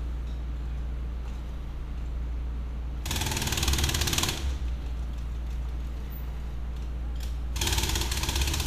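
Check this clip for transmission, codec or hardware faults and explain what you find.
No transmission, codec or hardware faults can be heard in this recording of sounds. Nothing in it calls for further explanation.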